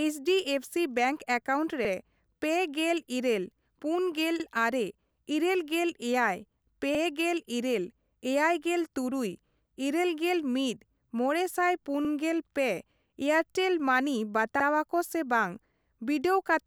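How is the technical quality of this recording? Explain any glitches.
The speech has a recurring join fault: overlapping chunks, at 1.85, 4.40, 6.95, 9.50, 12.05 and 14.60 s. Each time, about 50 ms of sound plays twice, heard as a brief stutter or click. The audio was handled in 2.5 s chunks, and each new chunk begins 50 ms before the previous one ended. That duplicated slice lands at every boundary, which is why the stutters arrive at a steady interval of roughly 2.5 s.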